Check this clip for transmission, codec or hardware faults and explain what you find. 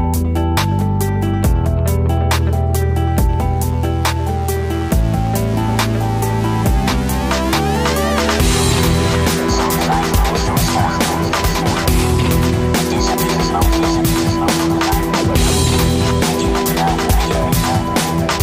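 No transmission, codec or hardware faults turned up here.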